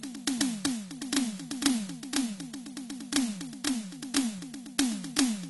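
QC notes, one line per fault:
Throughout: AAC compression, likely the cause of what is heard. Nothing remains above 11.5 kHz, so the music sounds dull. The damage is plainly audible, smeared and warbling, which fits a low bitrate near 32 kbps that starves the spectrum of bits.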